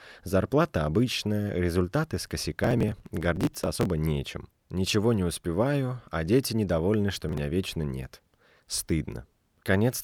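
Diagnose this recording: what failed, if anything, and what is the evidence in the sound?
Driver or buffer stage: processor overload crackle. After "обычная результаты с", gritty crackle runs from 2.64 to 3.85 s. It returns from 7.15 to 7.38 s, between "успеваю а дети недовольны" and "вечно нет". Buffers of a few milliseconds missed deadlines and were skipped, leaving hard-edged gaps.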